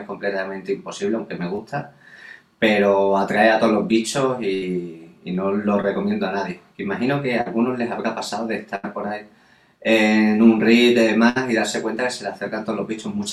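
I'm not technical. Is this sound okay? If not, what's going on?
No, it isn't. There are two kinds of dropout in it.

Short concealed packet loss happens at 1.55 to 1.60 s, 5.82 to 5.85 s and 7.41 to 7.48 s. Tiny pieces of the audio, 20 to 40 ms each, didn't arrive in time. The receiving end covered each hole by briefly stretching the sound just before it, then blended back into the real audio. You hear a quick smear or wobble, and a very short sound can disappear.

A burst of packet loss happens at 4.54 to 4.64 s, 8.76 to 8.85 s and 11.29 to 11.38 s. These are longer gaps, about 80 ms at the first two and 60 ms at the last. The receiver kept extending the last sound while fading it down, so it becomes a held buzz or a fading hiss. The audio then picks up further along, and the part in between is lost.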